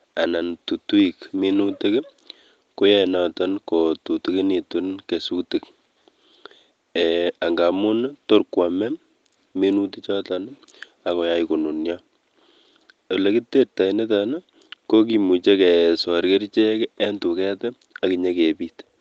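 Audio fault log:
Nothing stood out on listening, with the speech showing only the trimmed lowest bass and absence of content above 8 kHz that come from normal call microphone processing.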